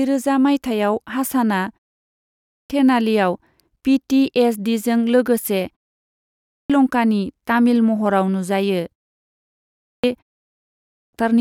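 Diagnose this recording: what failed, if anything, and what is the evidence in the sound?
The failure is at playback: a clipped start after a pause, where the output device dozes off in short gaps and misses the start of what follows. Each time the speech resumes after a pause of only about 0.4 to 0.5 s, roughly 0.57 to 0.65 s of sound goes missing: 2.13–2.70 s, 6.07–6.70 s (right after "टी एस डीजों लोगोसे"), 9.39–10.04 s and 10.56–11.13 s. Speech snaps in abruptly, already too late.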